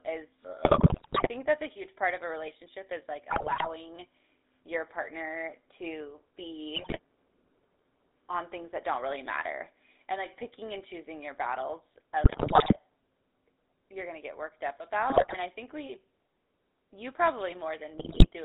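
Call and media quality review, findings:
GSM full-rate codec, whole clip: excitation reduced to regularly spaced pulses through a vocal-tract model, band limited to roughly 300 Hz to 3.7 kHz. Result: plainly audible buzzy, gravelly roughness on speech, no highs, consistent with 13 kbps GSM full rate.

GSM bit errors at 0.64–1.29 s, 3.30–3.66 s, 6.76–6.99 s, 12.24–12.77 s, 15.10–15.37 s, 17.98–18.27 s: corrupted filter, pitch and gain values reaching the decoder, pointing to a weak radio link. Result: squawks, pops, gargling and sudden level jumps lasting a fraction of a second.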